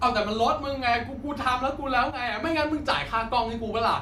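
At 2.11 s the speech suddenly drops in level by about 6 dB and stays there for roughly a third of a second, recovering abruptly at 2.43 s. The likely cause is one channel dropping out: with one side of the stereo signal missing, the mono sum keeps only half of the shared content, hence the sharp step down and back up.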